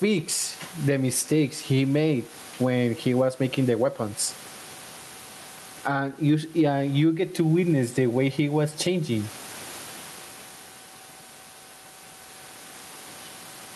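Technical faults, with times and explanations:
Throughout, gain pumping: a gain swing of around 15 dB, flattening loud and soft parts. The likely cause is input gain set far too high, with a fast limiter clamping each peak.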